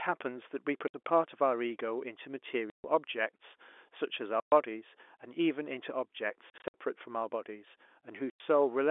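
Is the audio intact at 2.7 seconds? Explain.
No, at 2.7 s there's packet loss filled with silence: a 140 ms hole, likely seven 20 ms packets dropped, replaced by dead air with hard edges until 2.84 s.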